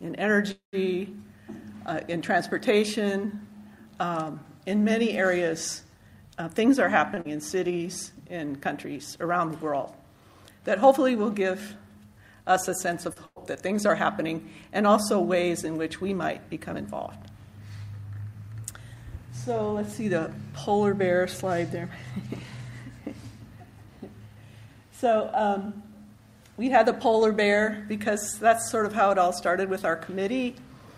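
At 0.51 s the audio halts for about a quarter of a second, until 0.75 s. The last sound carries on as a fading buzz or hiss, then drops to silence for about 130 ms. Playback then resumes from the same point. Nothing is lost, but 214 ms of gap has been inserted, and the delay grows by that amount. This is a call audio freeze. Its likely cause is packets held up on the way, leaving the jitter buffer empty.

From 6.42 to 6.98 s there is a jitter buffer speed-up. The buffer held more audio than its target. So the receiver cut out many short pitch-period pieces in a row, about a tenth of a second in total. The sound plays at 117% speed with its pitch unchanged. It comes across as rushed.

At 7.14 s comes a short stall from a late packet. The packet was not there when due, and the buffer ran dry. The receiver stretched the last sound for 24 ms until the packet arrived. Nothing goes missing. The sound is simply held a little too long, with a faint buzz or dip.

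Almost at once, from 7.21 to 7.27 s, the audio skips ahead. About a tenth of a second is dropped while later audio is already waiting. Only 38 ms of fill bridges the gap. The two sides join almost directly, so the sound jumps forward. This skip ahead cuts the delay by roughly 70 ms.

Then, from 7.55 to 8.47 s, a jitter buffer slow-down follows. The buffer was now running low or had just raised its target delay. The receiver repeated single pitch periods and bits of pauses, adding 81 ms. Playback runs at 92% speed at the same pitch. Sounds are drawn out.

At 13.13 s there is a second short stall from a late packet. The last sound is held for 33 ms until the packet arrives. Nothing is lost, but there is a brief hold with a slight buzz or dip.

From 13.26 to 13.38 s a burst of packet loss removes 100 ms of audio. The receiver continued the last sound for 98 ms, fading it as the gap went on. 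The result is a dying buzz or hiss. Then the audio picks up further on, with the part in between gone.

Finally, from 23.66 to 25.58 s, comes a longer jitter buffer speed-up. It is gentler than the first. Repeated trims remove roughly 150 ms over nearly two seconds. The sound runs at 108% speed with unchanged pitch. It feels slightly hurried rather than clipped.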